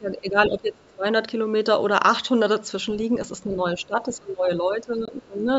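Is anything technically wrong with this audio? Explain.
Yes, there are three kinds of fault.

From 0.0 to 1.06 s and again from 3.45 to 5.47 s, speech is suppressed in double talk. The level sinks by up to about 20 dB in the first stretch and about 15 dB in the second, over roughly a second and a second and a half in total. The likely cause is an echo canceller that could not tell this talker from loudspeaker echo while both sides spoke, and so attenuated everything.

Between 0.82 and 0.95 s, the other side's voice leaks through as a faint second voice, some 35 dB below the main speech. It is likely residual echo: the far end played on the talker's loudspeaker, reached the microphone, and was not fully cancelled.

From 5.05 to 5.10 s there is a Bluetooth dropout, a gap of about 21 ms inside the second suppressed stretch. The audio then resumes as though it had kept running. A packet likely missed its deadline to the headphones, which fits a single lost frame.

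The call microphone processing is also audible, with nothing above 8 kHz. That processing is normal and not a fault.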